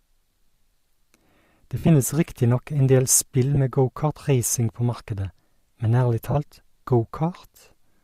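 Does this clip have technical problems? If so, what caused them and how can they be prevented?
Yes. Lost LE Audio frames on the Bluetooth link at 1.78–1.89 s (about 70 ms gone), 3.55–3.58 s (20 ms) and 6.31–6.36 s (40 ms) forced the LC3 decoder to conceal the gaps by repeating the last spectrum with scrambled signs. Each spot becomes a brief noisy smear in the speech. Keeping the receiver close to the source and clear of 2.4 GHz interference prevents these dropouts.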